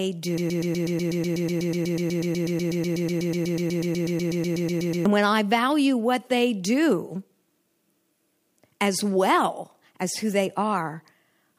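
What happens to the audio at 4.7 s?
At 4.7 s the speech is caught in a broken-record loop: one 123 ms fragment repeats exactly, back to back, about 38 times, from 0.38 s to 5.06 s, producing a rapid mechanical stutter with no new sound getting through. The likely cause is a stall in the player, encoder or stream that kept resending the last fragment it held, so whatever should have played across those seconds is lost.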